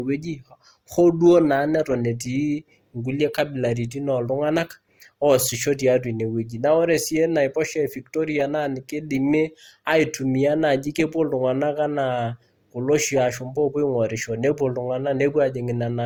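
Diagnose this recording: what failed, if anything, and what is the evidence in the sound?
The codec stage is where this one went wrong: it sounds like transcoding between lossy codecs across the whole speech clip. Two sets of artefacts stack up, which points to an MP3 around 96 kbit/s likely re-encoded to Opus near 32 kbit/s, with nothing above about 20.2 kHz.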